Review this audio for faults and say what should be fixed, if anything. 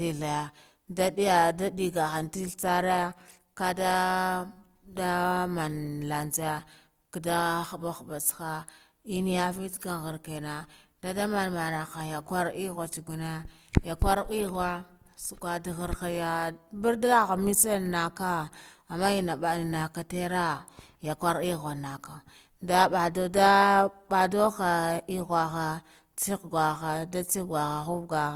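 Opus compression damage runs through the whole speech clip and is plainly audible. The sound is rough and grainy rather than swirling. The encoder likely ran Opus in its music (CELT) mode at a low bitrate, consistent with about 24 kbps. Starved bands get filled by folding lower bands or with noise, so tones turn noisy. Bandwidth stays full, reaching about 20.2 kHz. To prevent this, encode at a higher bitrate or keep an uncompressed master.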